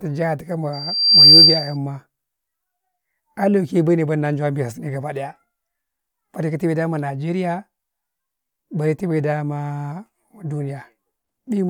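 From 0.73 to 1.77 s, a microphone picks up the loudspeaker it is feeding, and at 4.7 kHz the loop gain climbs above one. That one frequency reinforces itself on each pass, so a loudspeaker feedback squeal swells from nothing over about half a second into a piercing, steady whistle, ending up about 15 dB louder than the speech beneath it, before the loop is broken and the tone stops.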